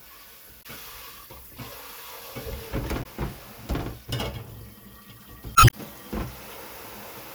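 At 0.59 to 0.66 s, 2.99 to 3.06 s and 5.53 to 5.74 s, damaged data in a compressed stream breaks through as short disruptions. Corrupted frames are misdecoded or discarded while the decoder hunts for the next valid header. The third lasts about 0.21 s. On a spectrogram each shows as a short disturbance with abrupt edges; the waveform shows a segment discontinuous at both ends.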